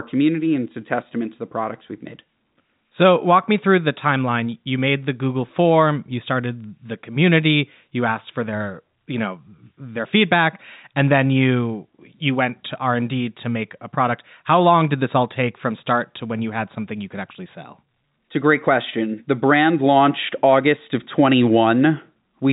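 No faults are audible in the speech; the G.711 A-law telephone path limits the band to below 4 kHz, as expected for that format.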